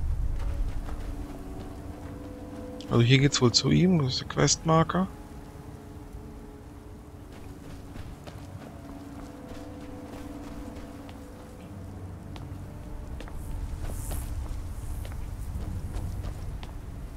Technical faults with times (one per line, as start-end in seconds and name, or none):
none